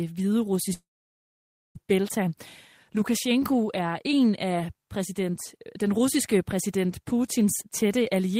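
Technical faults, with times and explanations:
0.73 to 1.78 s, long network dropout: speech breaks into a short fading buzz, then 0.92 s of silence, and resumes with 1.02 s lost, likely from packets lost in transit. The waveform shows a flat gap; a spectrogram shows a smeared tail, then blank.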